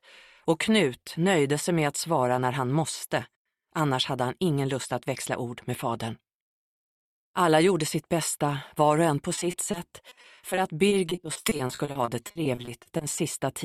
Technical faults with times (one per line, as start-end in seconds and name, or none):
9.35-13.19 repeated packet loss (robotic sound)